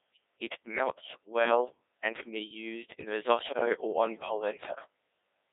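The whole clip passes through a Codec 2 vocoder. Only pitch, voicing, energy and a spectral outline survive, and the decoder rebuilds speech from sine waves. It sounds robotic and buzzy, confined to about 250 Hz to 3.7 kHz. The heavy damage fits the 1.6 kbit/s mode.

From 3.48 to 3.66 s, between "can be used in" and "or on", bit errors on digital voice radio strike. Corrupted bits, at a rate of a few percent, scramble pitch, level and tone. The sound lurches into warbling gibberish, which suggests about four damaged frames.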